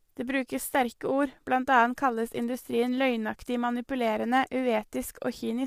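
A speech recording, rough and grainy throughout, with noise filling the gaps between harmonics and nothing above 15.6 kHz: likely low-delay AAC compression at a low bitrate, not a standard codec's swirling.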